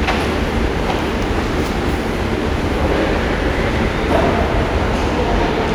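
No technical faults can be heard anywhere in the audio.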